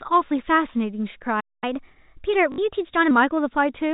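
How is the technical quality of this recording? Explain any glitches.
The recording has three glitches in a row, carried over narrowband telephone-style audio that stops at 4 kHz.

From 1.40 s to 1.64 s there is a playback stall: the speech cuts out in mid-flow and the output stays silent for roughly 0.22 s before resuming. The likely cause is that the player ran short of incoming data or its thread was held up, so it simply had nothing to output. Unlike a dropout inside the signal, this gap is followed by a speed change as the player recovers.

From 1.64 s to 3.11 s, catch-up at higher speed follows. The player works through its backlog by resampling at 1.15 times normal speed, so the voice sounds hurried and sits about two semitones higher. Because the pitch rises along with the speed, this is resampling rather than time-stretching, which would keep the pitch steady.

From 2.52 s to 2.58 s, within that faster stretch, there is packet loss with last packet repeated. 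About 60 ms of audio, which fits three 20 ms packets, was missing, and the receiver filled the gap by replaying the last good chunk. The repeats seldom line up with the pitch cycle, so the run takes on a brief robotic buzz. That mechanical stutter separates it from the silent stall.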